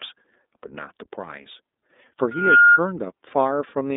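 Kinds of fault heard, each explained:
iLBC codec: The whole clip passes through the iLBC narrowband VoIP codec, which codes each 30 ms frame's excitation on its own, with no help from the frame before. The speech sits in a line band of about 250 Hz to 3.7 kHz, with nothing above 3.8 kHz. The coding damage is plainly audible as a rough, slightly synthetic texture, and the sound points to the 30 ms mode at roughly 13.3 kbps.
Loudspeaker feedback squeal: From 2.31 s to 2.80 s, a microphone picks up the loudspeaker it feeds. At one frequency the loop gain climbs above unity, so that frequency keeps reinforcing itself. Here a single 1.4 kHz tone swells over roughly a third of a second. It peaks around 10 dB louder than the speech before ending at 2.80 s, when the loop is broken or its gain falls.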